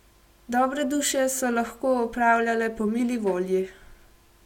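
Speech recording, and nothing in it registers as a technical fault on listening.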